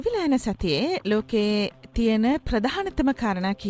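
Packets reached the jitter buffer late and it kept running dry between 1.62 and 2.52 s, giving repeated stalls (stutter): ten brief holds, none longer than 15 ms, where the last sound is stretched rather than dropped, so the audio drags and stutters. The call path's G.722 coding leaves nothing above 8 kHz.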